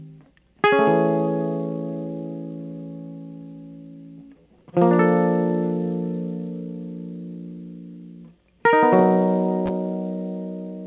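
Nothing stood out on listening to this music, which comes through a call path with nothing above 4 kHz.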